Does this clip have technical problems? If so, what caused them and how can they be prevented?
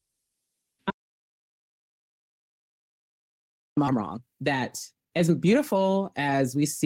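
Yes. The input was likely lost for a moment, through a disconnected device, a failed link or a mute, while recording carried on writing silence. This is an audio dropout to silence: from 0.90 to 3.77 s the speech stops dead and nearly 2.9 s of silence follows, with no room tone at all. Securing cables and connections and monitoring the input level would prevent this.

Right after the speech resumes, the receiver discarded a block of buffered audio, about a second and a half of it, to catch up. This causes a skip ahead at 3.87 to 3.89 s, where the sound jumps forward with no gap and the two sides are spliced almost directly. A larger jitter buffer that avoids overflow would prevent this.

After the jump, the jitter buffer still held more audio than its target, so it kept cutting out short pitch-period pieces, removing around half a second in total. This jitter buffer speed-up makes the speech from 3.91 to 6.85 s run at 119% speed at the same pitch, so it sounds hurried. 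A steadier network and gentler buffer adaptation would prevent this.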